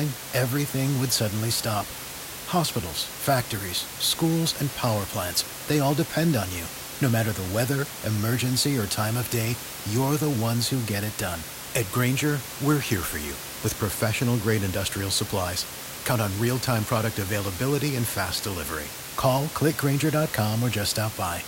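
No technical faults are audible.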